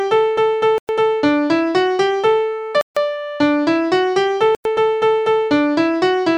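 At 0.78 to 0.89 s, 2.81 to 2.97 s and 4.55 to 4.65 s the sound drops abruptly to silence for about 110, 150 and 100 ms, then resumes. These gaps are most likely a Bluetooth stall, where radio interference delayed packets until the headphones' buffer emptied. On a waveform each appears as a flat line with hard edges, and on a spectrogram as a clean vertical band of blank across all frequencies.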